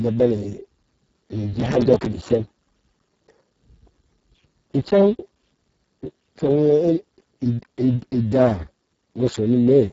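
From start to finish the speech carries heavy Speex codec damage. At this very low quality setting, which fits a bitrate near 6 kbps, the CELP coder has too few bits to describe the excitation, so voiced sounds turn hoarse and buzzy, with a noisy, robotic edge. Nothing is present above 7.7 kHz, and the band above 4 kHz carries only a shaped, noise-like fill rather than real detail.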